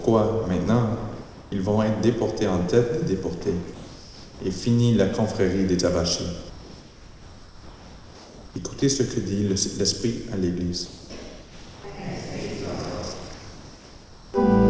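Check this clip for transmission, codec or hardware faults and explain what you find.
Two kinds of fault turn up, both tied to the silence handling of a call link whose audio stops at 8 kHz, which fits G.722 at 64 kbps.

Comfort noise in place of the background, at 1.22–1.52 s, 3.74–4.40 s, 10.86–11.10 s, 11.42–11.84 s and 13.34–14.34 s: the background, about 21 to 23 dB below the loud parts, turns flat and featureless, within about 2 dB of its usual level. The likely cause is discontinuous transmission, with the receiver synthesising noise during the pauses.

Sound dropped by the voice detector, at 8.80 s: a 20 ms sliver of sound disappears and plain steady noise takes its place. The likely cause is that the sender's detector briefly mistook real sound for background, stopped sending, and the receiver filled the gap with comfort noise.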